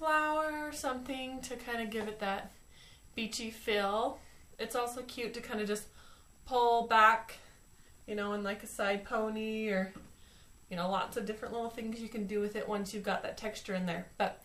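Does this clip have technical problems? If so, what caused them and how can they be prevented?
No, nothing in the recording points to a technical fault, so there is no cause to trace and nothing to prevent.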